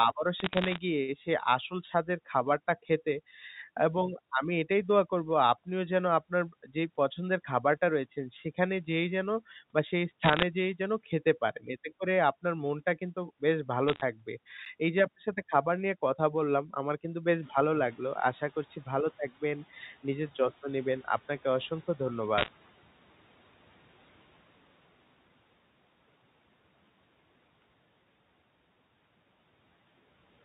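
Sharp ticks and a brief crackle run across the speech at 0.40 to 0.78 s, 10.24 to 10.43 s and 13.88 to 14.01 s. These are bit errors on a digital phone line. Flipped bits in the G.711 mu-law stream each corrupt one sample, and hits on the sign or high bits produce the loudest ticks. The rate is under one percent in these stretches.

At 14.65 s a quick click breaks the sound. This is a block of digital silence: about 10 ms of zeros were played, and the hard cut to nothing and back creates the click without any audible hole.

From 17.42 s the background noise swells. The room noise jumps by about 18 dB near 17.5 s, and the noise suppressor is catching up. Its noise estimate lags, so the noise passes with little reduction at first. Over 5.22 s the reduction deepens to about 12 dB and the noise settles.

At 22.38 to 22.48 s more bit errors bring a cluster of ticks. The error rate here is higher, somewhat above one percent.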